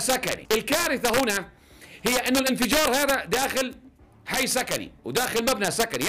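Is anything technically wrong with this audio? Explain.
Yes, there are two faults.

Integer overflow runs throughout. Peaks pushed about 1 dB past full scale wrap to the opposite sign, giving sharp cracks on the loudest moments.

Word clock ticks run from 0.12 s to 6.06 s. They come about ten times per second, which fits unlocked clocks drifting apart by roughly 200 ppm. Each slip drops or repeats one sample, giving uneven ticks.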